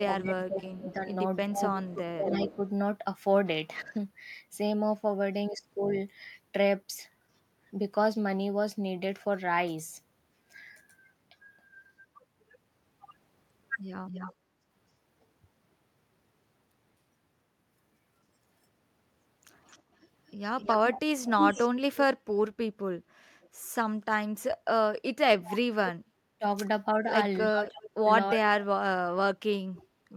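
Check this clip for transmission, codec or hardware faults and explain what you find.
The clip has echo-canceller faults from a loudspeaker path.

Echo leak at 0.0–3.9 s, 14.07–14.33 s, 19.7–23.49 s and 27.66–29.82 s: delayed copies trail the sound by 294, 258, 320 and 320 ms, at about 15, 15, 5 and 25 dB below it. This is likely residual loudspeaker pickup that the canceller missed. On a spectrogram it shows as a shifted duplicate of the harmonics.

Speech suppressed in double talk at 0.06–3.96 s and 25.37–29.6 s: the sound dips, by around 15 dB and then up to around 40 dB, for roughly 1.5 s and 2 s in total. This is likely the canceller attenuating the near talker during overlap. The waveform shows gouged, notched envelopes.

Background gated by the echo canceller at 24.53–24.64 s: room noise drops about 15 dB for roughly 100 ms, leaving a brief gap in the noise floor.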